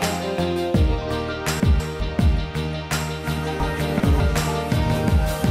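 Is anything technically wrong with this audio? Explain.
Yes. There are two cases of chunks out of order. At 1.6 to 2.0 s, a 200 ms chunk plays one chunk late. At 3.6 to 4.2 s, one arrives two chunks late. No audio is lost. The order is jumbled, with three hard joins in each case.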